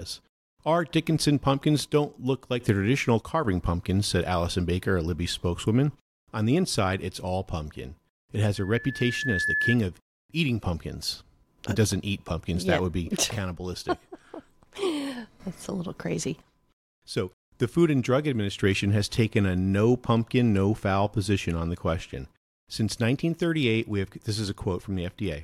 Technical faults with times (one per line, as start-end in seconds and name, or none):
8.56-9.77 loudspeaker feedback squeal